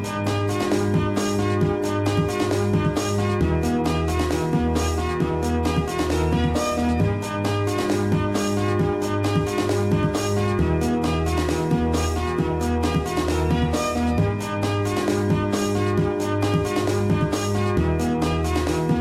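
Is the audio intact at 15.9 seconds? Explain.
No, there's a wrong sample rate throughout, including 15.9 s: it sounds like 32 kHz audio played at 44.1 kHz, so everything runs 1.38 times fast and about 5.5 semitones sharp.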